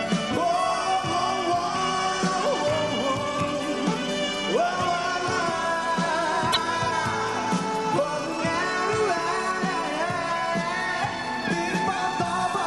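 At 6.52 s the audio jumps ahead, and about 50 ms of broken sound follows until 6.57 s. The likely cause is a broken MP3 bit reservoir. Frames were lost, so the next frames read borrowed bytes from the wrong place. The length fits two 24 ms frames.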